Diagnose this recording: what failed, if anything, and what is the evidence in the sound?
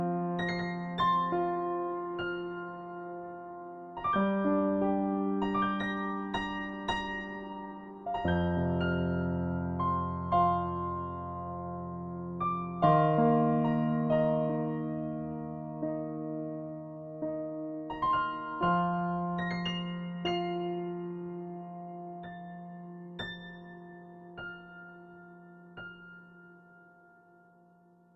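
Nothing failed: the sound offers no evidence of a fault at any stage.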